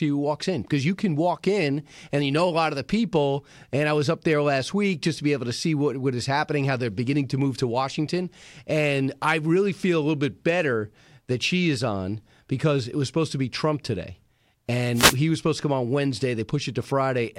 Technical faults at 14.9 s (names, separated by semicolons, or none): wireless microphone noise hit